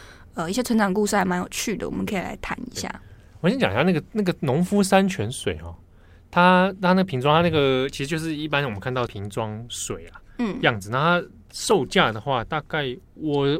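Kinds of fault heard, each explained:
Audio missing between chunks: speech skips briefly every 3 s, likely lost at chunk joins, each showing a waveform jump and thin vertical spectrogram line.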